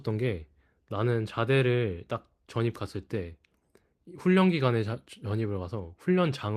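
Speech, with nothing technically wrong with it.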